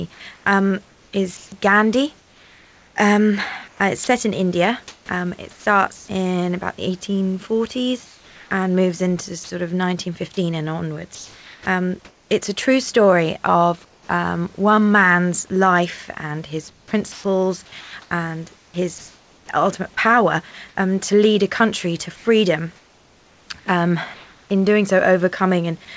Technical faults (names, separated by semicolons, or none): sound chopped by the voice detector